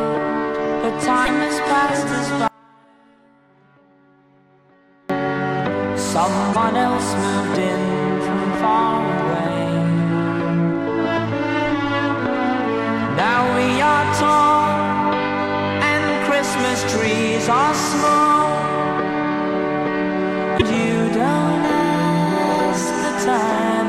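At 1.24 to 1.29 s there's a short garbled blip where the sound jumps ahead instead of flowing on. That's most likely a broken MP3 bit reservoir: frames went missing, and the next frame reached back for its borrowed data and found bytes of another frame instead. The 44 ms of damage fits one or two MP3 frames of about 26 ms each. The same blip comes back at 6.52 to 6.56 s and again at 20.57 to 20.62 s.

Between those, from 2.48 to 5.10 s, the audio drops out for about 2.6 s. It cuts away abruptly rather than fading, and only a faint residue of the sound is left, around 35 dB below its normal level. It then snaps back just as suddenly. This is an audio dropout to a faint residue, likely from the wanted signal being lost while the path after the break stayed live and kept passing that low leak.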